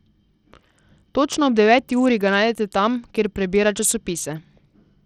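Likely Bluetooth SBC compression, at a rate that fits about 80 kbps, starves the upper sub-bands throughout: the speech's treble flickers under a gritty noise.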